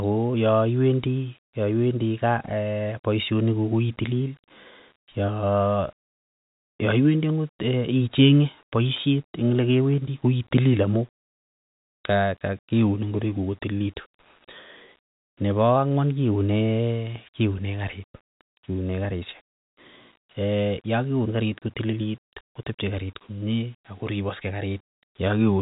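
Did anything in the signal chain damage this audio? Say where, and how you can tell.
No, nothing in the chain damaged this speech; the only audible trace of the path is the G.711 telephone coding, with nothing above about 3.8 kHz, and that band limit is normal for a phone line.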